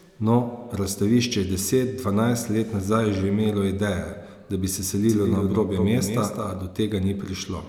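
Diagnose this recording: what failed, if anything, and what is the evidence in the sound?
From 5.09 to 6.63 s a dry, quieter copy lags the speech by about a fifth of a second. This is a doubled audio track, likely from a slower duplicate capture path.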